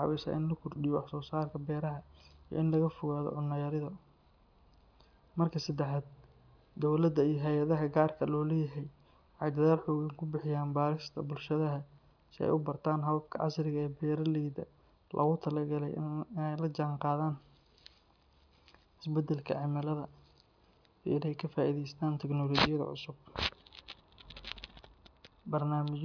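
Nothing stood out as a technical problem on listening to this recording of speech.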